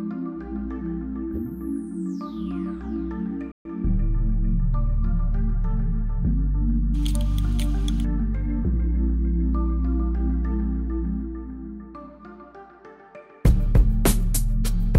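At 3.52 s the sound cuts off mid-flow and stays silent for about 134 ms, resuming at 3.65 s: a playback stall, likely from the player running out of data or its thread blocking. The waveform drops to a flat line, and the spectrogram shows a clean vertical gap across all frequencies.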